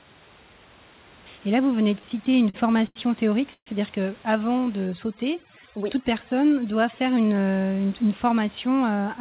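Just after "là vous", from 1.88 to 2.97 s, the speech shows repeated stalls (stutter). Packets kept arriving late, so the jitter buffer ran dry eleven times. Each gap was filled by stretching the last sound, the longest for 87 ms. That adds up to 214 ms, about a fifth of the span. Nothing is lost, but the speech drags and stumbles.

From 3.53 to 3.68 s there is a call audio freeze. The sound hangs as a brief buzz that fades into 60 ms of silence, filling 130 ms in all. The likely cause is packets held up in transit, which emptied the buffer. Speech then resumes where it stopped, so a gap has been inserted and nothing is missing.

From 4.87 to 7.35 s there is overdone noise removal. The suppressor was set too hard. It cuts individual frequency bands whenever they sink toward its noise estimate, and quiet parts of the speech go with them. The background drops and breaks up into twinkling, warbling specks.

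Inside that stretch, from 6.65 to 7.25 s, a jitter buffer speed-up follows. The buffer had built up extra audio, so the receiver trimmed many short pitch-period slices, about 70 ms in total. The speech runs at 110% of normal speed with unchanged pitch and sounds hurried. Throughout the clip, nothing is heard above 4 kHz, which fits a narrowband call codec.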